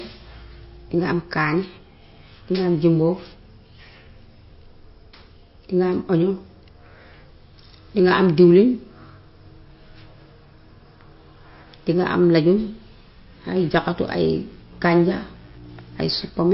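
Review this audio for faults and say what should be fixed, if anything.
Across the whole speech clip there is plainly audible MP3 compression damage, likely from a low-bitrate encode, which fits about 32 kbps. Nothing remains above 5.6 kHz, weak spectral detail flickers on and off between frames with a watery, swirly quality, and consonant onsets smear. To prevent it, record and deliver at a higher bitrate or in a lossless format.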